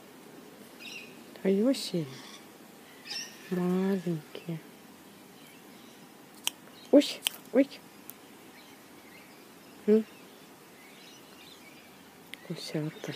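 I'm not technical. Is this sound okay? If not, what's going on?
Yes, nothing technically wrong can be heard anywhere in this recording.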